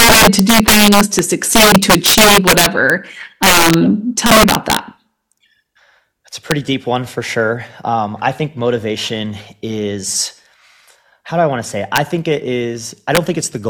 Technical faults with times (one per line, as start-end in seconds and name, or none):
0.00-2.90 integer overflow
3.43-3.74 integer overflow
4.26-4.77 integer overflow
6.51 integer overflow
11.96 integer overflow
13.15-13.17 integer overflow